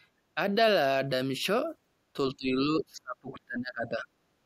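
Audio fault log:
0.35–0.39 s, speech suppressed in double talk: a brief dip of about 10 dB in the speech. The likely cause is an echo canceller that, hearing both ends active at once, mistook the talker for loudspeaker echo and pulled the level down.
2.13–4.07 s, speech suppressed in double talk: the speech drops away, by as much as about 25 dB, for roughly a second and a half in total. It likely comes from the echo canceller clamping down while the far side was also speaking.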